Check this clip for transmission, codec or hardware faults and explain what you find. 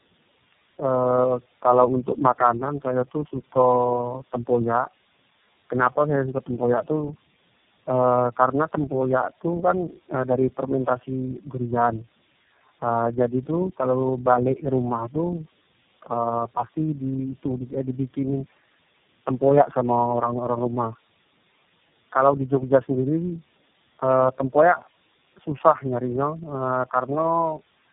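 There's one fault, and it runs the whole way through: tandem speech coding. The speech sounds like it went through about four low-rate speech codecs in a row, each re-encoding the last one's damage, so it's rough, muffled and warbly, with nothing above 3.8 kHz.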